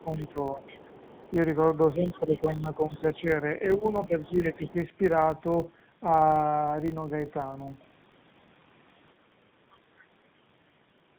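The speech carries two faults from start to finish. The first is tandem speech coding: the roughness, muffling and warble point to two low-rate speech codecs applied one after the other, which fits a GSM full-rate stage followed, via a G.711 link, by AMR-NB at around 7.95 kbit/s. The second coder had only the first one's damaged output to work from, so the errors stack. The band also stops at about 4 kHz, which removes sibilance and leaves the sound boxed in.

Running under everything is a 50 Hz buzz from a filter restarted on every block. The processing filter drops its stored state at each block boundary and starts again from zero. That puts a small click at the start of every block, and the clicks repeat quickly enough to merge into a tone. A 50 Hz rate fits 20 ms blocks. The buzz rises and falls with the speech level rather than sitting at a fixed level.

From 0.0 to 1.33 s there is the other side's voice leaking through, roughly 25 dB below the main talker. 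It is faint, and is likely residual loudspeaker echo that the echo canceller did not fully remove. It returns at a similar level from 2.14 to 3.2 s and more weakly, around 30 dB down, from 4.24 to 4.72 s.

Overlapping the first leak is speech suppressed in double talk between 0.03 and 0.62 s. The talker dips by up to roughly 10 dB in short pieces totalling about a fifth of a second. This is likely the echo canceller being unable to separate the talker from the echo and turning both down. A longer stretch follows from 1.95 to 4.76 s, where the dips add up to about a second and a half.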